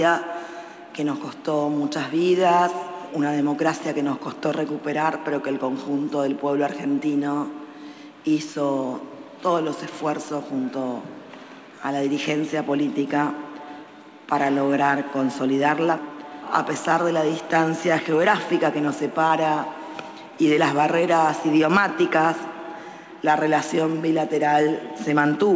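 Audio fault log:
19.28–19.31 s, short concealed packet loss: about 20 ms failed to arrive in time, so the decoder stretched the preceding sound and then blended back, giving a brief smear. A spectrogram shows the filled gap below the G.722 path's 8 kHz ceiling.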